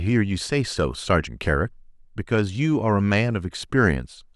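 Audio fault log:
There is no fault.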